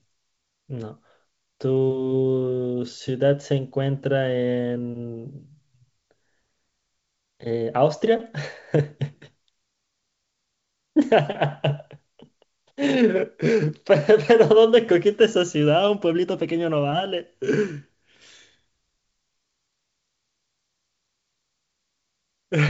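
Speech, with no technical fault to report. It is carried by G.722 wideband telephone coding at 64 kbit/s, so nothing is heard above 7.7 kHz, and any trace of the coder is faint at most.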